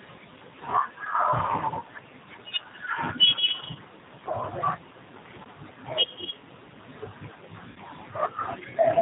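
The whole recording carries the sound of the G.729 codec, consistent with its 8 kbit/s G.729A variant. The speech is rebuilt from a filter and sparse pulses, giving a plainly rough, synthetic edge. On a spectrogram the energy stops at a hard ceiling at 4 kHz.

At 3.72 to 3.78 s and again at 7.70 to 7.79 s, VoIP packet loss concealed by the speech codec takes over. The first gap suggests a single lost 30 ms packet, and the second fits two packets totalling 60 ms. The decoder extends its last pitch and filter into a fading buzzy tone or coloured noise, then takes a moment to recover. A spectrogram shows smeared, repeated patterns, and the waveform shows a decaying envelope.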